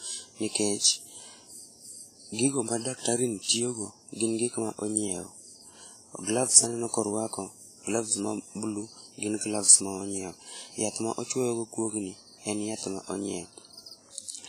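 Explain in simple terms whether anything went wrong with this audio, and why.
The speech has heavy WMA compression damage throughout, from start to finish. It sounds washy and ringing, with a hiss that swells and fades with the voice. Nothing is heard above about 15 kHz. The likely cause is squeezing the file too hard when saving.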